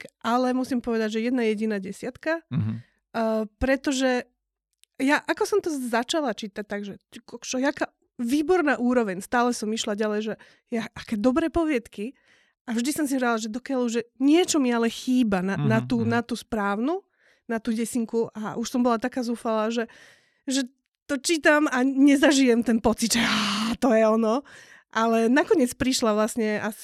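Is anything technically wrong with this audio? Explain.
No, nothing technically wrong turns up anywhere in this speech recording, so there's nothing to flag here.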